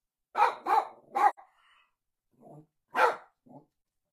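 A recording of everyday sounds with two gaps from AAC frame loss with muting. At 1.29 to 1.39 s the sound fades out and back in around a hole of about 85 ms, consistent with two consecutive lost frames. At 3.78 to 3.90 s about 43 ms of loss is scattered across 128 ms, the longest run near 40 ms, fitting a single frame. The decoder zeroed the missing spectrum and overlapping windows tapered the edges, so a spectrogram shows full-band vertical gaps with soft boundaries and the waveform shows a smooth envelope dip.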